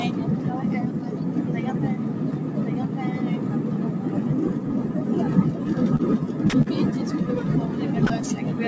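Throughout the clip, a noise suppressor designed for speech treats sustained parts of the sound and its ambience as noise. Level swings by roughly 5 dB as onsets pass and held portions and decays are pulled down, giving a pumping, thinned texture.

At 5.96 s and again at 6.62 s, short concealed packet loss produces brief smears. About 30 ms of audio failed to arrive each time, and the receiver extrapolated from the preceding sound for 29 ms and 39 ms respectively before crossfading back.

At 6.50 s and 8.07 s, the sound gives way for 30 ms to flat, steady noise. This is likely sound dropped by the voice detector, which judged the signal to be background and stopped transmitting, so comfort noise filled the gap until transmission resumed.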